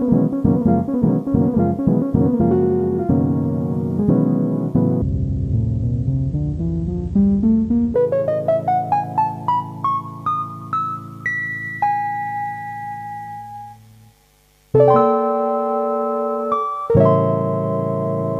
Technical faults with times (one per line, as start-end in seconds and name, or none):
5.02-7.94 section at the wrong speed